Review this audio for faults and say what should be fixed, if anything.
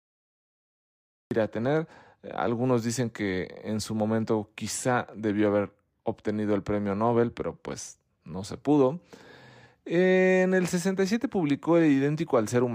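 The capture began late, after the talker was already mid-phrase, which gives a cut-off start: from 0.0 to 1.31 s there is only digital silence, and at 1.31 s the speech appears abruptly at full level, going straight into "a tener" with no natural onset or fade-in, so whatever preceded it is missing. To prevent this, start recording with pre-roll or a pre-trigger buffer so capture is running before the first sound arrives.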